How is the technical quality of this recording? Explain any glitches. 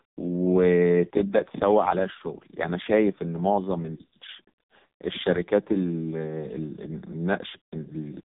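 Poor. Heavy AMR narrowband mobile codec damage runs through the entire recording: content stops near 3.8 kHz, and the bit-starved vocal-tract model renders speech buzzy and synthetic, consistent with the lowest 4.75 kbps mode.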